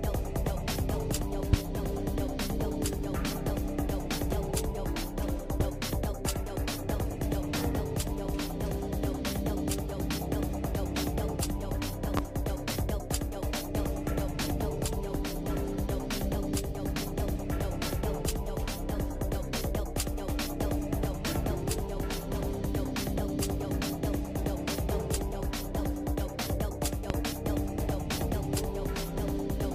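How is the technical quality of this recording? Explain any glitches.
The recording has four loud pops, at 1.53–1.56, 5.60–5.63, 12.17–12.20 and 27.10–27.13 s. Each is a single sharp pop lasting about 30 ms, around 20 dB above the sound, though the second is about 15 dB. The likely cause is a voltage pulse from a switch, plug, static or driver glitch. The sound continues underneath each one.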